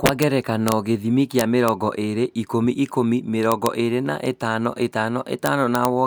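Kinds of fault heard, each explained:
Integer overflow: speech peaks pushed barely past full scale wrap to the opposite sign, giving harsh cracks far sharper than clipping's flattened, buzzy distortion.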